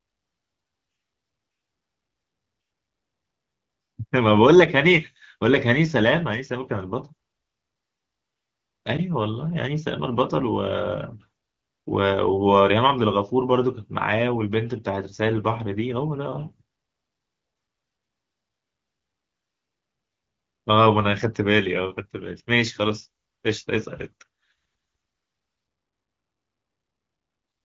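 No technical faults are audible.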